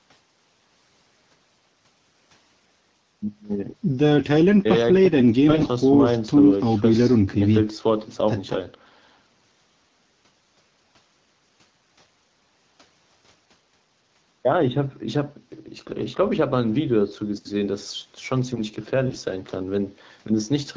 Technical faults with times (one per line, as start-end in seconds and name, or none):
5.49-5.67 AMR bit errors
19.08-19.23 AMR bit errors